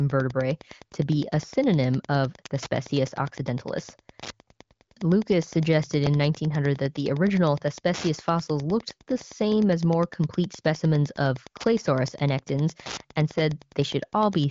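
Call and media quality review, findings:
Wi-Fi interference, whole clip: steady ticking about ten times a second, spaced 102.4 ms, roughly 20 dB below the speech. Nearby radio beacon rectified in the audio circuit. Regular clicks rather than tonal buzz, which rules out mains hum.

Repeated buffer, 6.06 s and 13.38 s: brief click-like buzzes, each a roughly 5.8 ms piece replayed, once at 6.06 s and twice at 13.38 s. Points to a 256-sample buffer. Late audio made the device play the previous buffer again. The same piece repeats instead of a silent dropout.

AMR wideband (HD Voice) codec: bandwidth stops near 7.5 kHz, and the sound points to AMR-WB at about 18.25 kbit/s.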